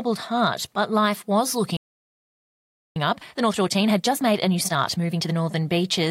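At 1.77 s, right after "but life was", the speech cuts off mid-flow and silence holds until 2.96 s, a gap of about 1.2 s. This is a playback stall, most likely the player running dry of buffered data or having its output thread held up, so nothing reached the output until it recovered. On a waveform the envelope drops abruptly to a flat line; a spectrogram shows a clean vertical-edged blank band across all frequencies.

From 2.96 s to 5.34 s the speech resumes in time-compressed catch-up: the player works off its backlog by trimming and cross-fading short slices, running at about 1.5 times normal speed while keeping the original pitch. It sounds hurried, with syllables crowded together. The spectrogram keeps harmonics at their usual heights but squeezes formant movements horizontally, and the waveform shows syllable bursts packed more tightly than before the gap.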